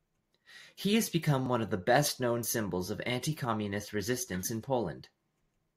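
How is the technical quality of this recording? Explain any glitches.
Three tiny skips interrupt the speech at 1.46 s, between "has become" and "one of the", then at 2.46 s and 4.43 s. Each is an overlap between stream segments: the 1 s segments carried overlapping time stamps, and trimming the supposed duplicate removed 5 to 17 milliseconds of real audio, making the waveform jump.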